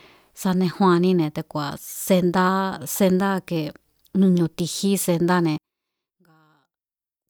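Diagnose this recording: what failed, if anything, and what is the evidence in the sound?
One channel inverted, likely from a polarity swap in the analogue wiring, affects the speech from 5.58 s to the end at 7.29 s. Summed to mono, the content common to both channels cancels and the level falls by about 34 dB.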